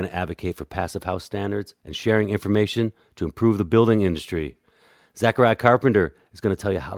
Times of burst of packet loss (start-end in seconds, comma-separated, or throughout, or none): none